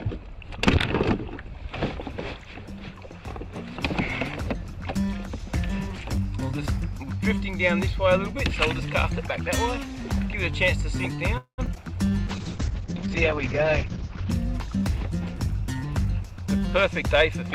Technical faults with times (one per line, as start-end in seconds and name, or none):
11.37-11.60 call audio freeze
11.66-11.78 short concealed packet loss
12.28-14.36 call bitrate drop
14.67-15.83 jitter buffer speed-up
16.24-17.52 jitter buffer speed-up